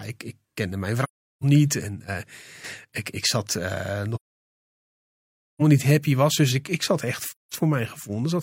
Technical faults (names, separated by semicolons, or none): AAC frame loss with muting